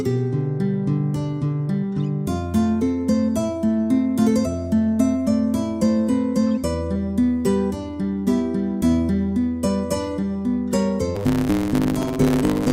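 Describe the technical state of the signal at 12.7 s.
At 12.7 s you're inside a block size mismatch (truncated) that runs from 11.15 s to 12.73 s. Each block, which fits 512 samples, loses its tail, so there's a 109 Hz buzz and the sound rushes along about 1.16 times faster with its timbre intact.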